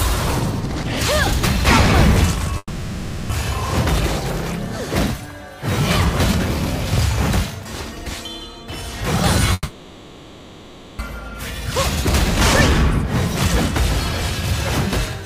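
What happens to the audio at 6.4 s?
Nothing goes wrong at 6.4 s; the audio runs through that moment intact, with no dropout, click, glitch or other audible fault.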